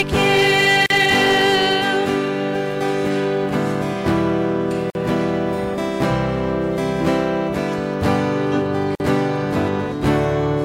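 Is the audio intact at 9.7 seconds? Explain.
Yes, at 9.7 seconds the audio is intact, with no audible fault at that moment.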